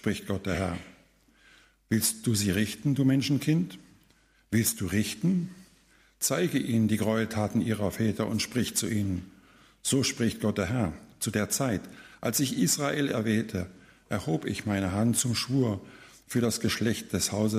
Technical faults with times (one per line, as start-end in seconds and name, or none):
0.00-17.59 sample clock jitter